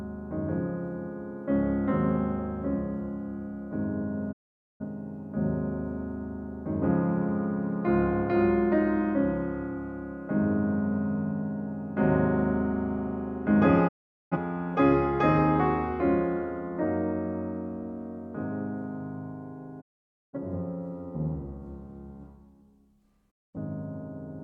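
Digital broadcast dropouts mute the sound at 4.31–4.84 s, 13.87–14.37 s, 19.80–20.38 s and 23.30–23.57 s. The receiver loses valid frames and fades to silence within 20 ms until good frames return. Waveform: flat gaps. Spectrogram: blank vertical bands.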